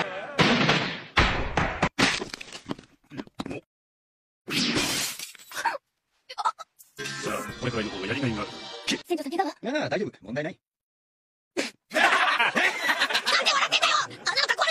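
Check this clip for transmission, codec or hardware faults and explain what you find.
Two faults appear near the end of the clip.

From 11.86 s to the end, the sound turns thin, bright and hissy. This is pre-emphasis left on: an FM-style 50 µs treble boost was never undone, lifting 10 kHz about 11 dB.

At 13.29 to 13.34 s, the audio jumps ahead; this is the compressed frames skipped fault. Several frames, roughly 300 ms of audio, were never decoded, consistent with frames of about 46 ms.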